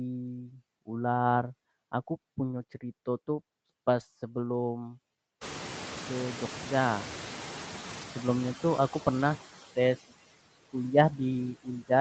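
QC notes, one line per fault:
Throughout, noise suppressor artifacts: background noise is pulled down by about 14 dB and dips between phrases, as bands are lowered frame by frame.
1.45–1.47 s, 2.57–2.63 s, 4.45–4.55 s, 5.97–5.99 s, 7.89–8.03 s, 9.19–9.33 s, lost packet rebuilt from error correction: no gaps, but there are brief rough, grainier patches lasting 20, 40, 60, 20, 80 and 80 ms where the decoder played low-bitrate backup copies.
5.41–8.19 s, noise suppressor catching up: room noise jumps around 5.5 s, and the suppressor's estimate trails it, letting noise through with only about 6 dB cut before it settles over roughly 2.8 s.
11.55–11.9 s, speech cut by the noise suppressor: about a tenth of a second of soft speech gets mistaken for noise and ducked by up to about 18 dB, sounding swallowed.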